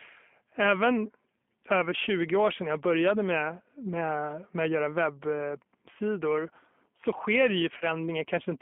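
A speech recording passed through the G.729 codec at 8 kbit/s, so the whole clip sounds slightly rough and synthetic. On a spectrogram the energy is confined to roughly 200 Hz to 3.4 kHz, with nothing above, and harmonics look smeared where the pulse excitation rebuilds the voice. Just after "webbsidor så sker det", from 7.78 to 7.85 s, there is VoIP packet loss concealed by the speech codec. About 30 ms of audio went missing, which fits three 10 ms frames. The decoder repeats its last pitch and filter, so the waveform shows a short, decaying extrapolated sound. The spectrogram shows that sound fading out, and the voice stays weak or distorted for a while after speech returns.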